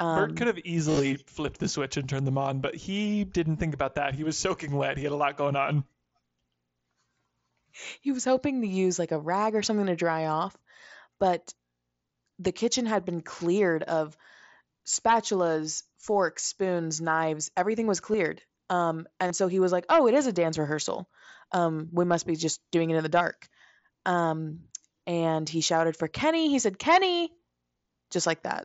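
Right near the start, from 0.90 to 1.00 s, there's concealed Bluetooth headset packet loss: audio packets from the headset drop out, about 68 ms in total across that stretch, and the phone fills each gap by repeating a best-matching chunk of recent waveform. The longest run, around 30 ms, gives a short buzzy, held tone with a slight warble as real speech resumes. A brief 15 ms loss follows at 18.13 s, and at 19.27 s a 30 ms loss buzzes again, all over the light graininess of the mSBC link.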